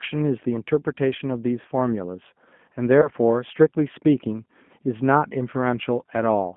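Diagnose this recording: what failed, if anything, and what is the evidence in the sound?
The codec stage is at fault throughout. This speech runs through a G.729 codec at 8 kbit/s, and the damage is plainly audible. The band sits between about 150 Hz and 3.4 kHz, with nothing above. The speech has a rough, synthetic grain. That comes from the coder rebuilding each 10 ms frame from a vocal-tract filter, a pitch predictor and a few pulses rather than sending the waveform itself.

At the network stage, there is VoIP packet loss concealed by the speech codec from 3.02 to 3.09 s. About 20 ms of audio is missing, which fits two lost 10 ms frames. The decoder filled the gap by extending its last pitch and filter settings with falling gain. The sound briefly smears out and fades. Because each frame depends on the previous one, the sound stays weak or distorted for tens of milliseconds or more after about 3.09 s.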